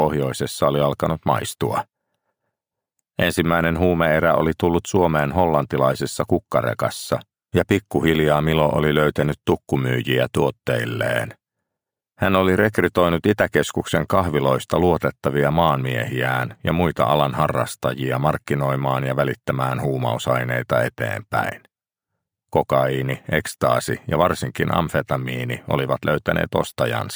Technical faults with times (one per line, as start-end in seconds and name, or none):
0.00-27.15 crude rate conversion